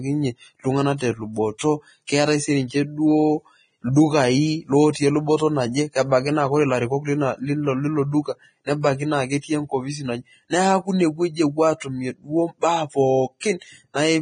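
Likely Vorbis compression throughout this speech clip: nothing above 9.7 kHz, and coarsely quantised treble sounds hissy and grainy, fitting a bitrate near 22 kbps.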